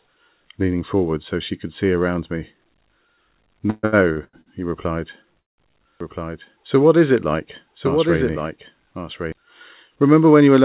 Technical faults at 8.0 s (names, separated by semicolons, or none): doubled audio track